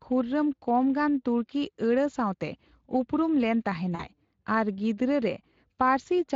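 Speex codec, throughout: this CELP coder's limited excitation bits leave the speech plainly hoarse and noisy, a texture that fits a rate near 20 kbps. VoIP packet loss concealed by the speech codec, 3.95 to 4.10 s: about 40 ms of audio is missing, and the decoder stretches its last pitch and filter into a fading sound that stays weak briefly afterwards.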